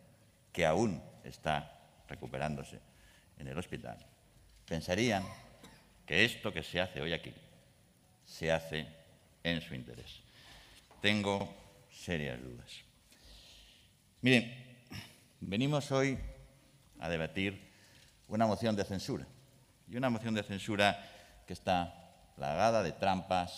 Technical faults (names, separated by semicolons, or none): overlapping chunks